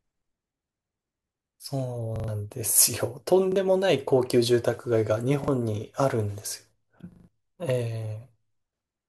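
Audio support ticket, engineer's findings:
Repeated buffer at 2.16–2.28 s, 3.52–3.56 s, 5.44–5.48 s and 7.12–7.28 s: speech stutters as one short slice replays with hard joins, consistent with a 40 ms buffer. Playback device starved of new data, so it resent the last block, losing roughly 0.1–0.15 s at the longest events.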